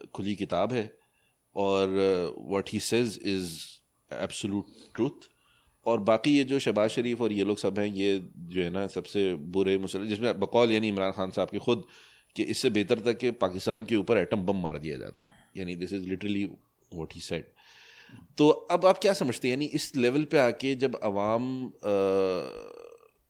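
At 13.69 to 13.84 s and 14.65 to 14.74 s, bursts of packet loss drop 120 ms and 60 ms of speech. Each gap is bridged by a fading continuation of the last sound, and the speech then resumes further on. At 15.13 to 15.34 s a longer 180 ms stretch is filled the same way without reaching silence, likely a long network dropout, distinguished by its greater length.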